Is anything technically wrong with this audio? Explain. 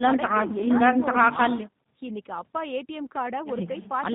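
Yes, the whole speech clip carries G.729 codec damage, and it is plainly audible from start to finish. The speech is rebuilt from a vocal tract filter, a pitch predictor and a few pulses per 10 ms frame, which fits an 8 kbit/s G.729A stream. Nothing survives above 4 kHz, and the voice sounds rough and synthetic. That synthetic grain is what distinguishes it from a simple 4 kHz low-pass, which would only dull the sound.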